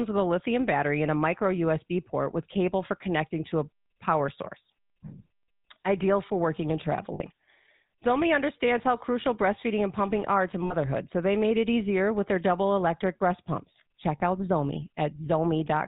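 Throughout, the speech carries the buzzy, gravelly roughness of the GSM full-rate codec, consistent with its 13 kbps coding. The vocal-tract model is excited by a sparse, regularly spaced pulse train, so the grain is plainly audible. Nothing passes above 4 kHz.

Lost GSM frames occur at 7.14 s and 10.64 s, each holding about 60 ms, which fits three 20 ms frames. A shorter loss of about 20 ms, fitting one frame, occurs at 14.18 s. The decoder repeats the last good frame, leaving a brief rough, metallic ring.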